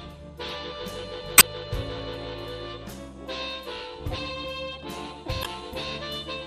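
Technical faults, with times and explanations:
1.35 to 1.43 s and 5.41 to 5.46 s, damaged data in a compressed stream: corrupted bytes make the decoder misread frames and lose sync while it hunts for the next valid frame header, so each spot comes out as a brief chirp or squawk lasting 80 ms and 50 ms.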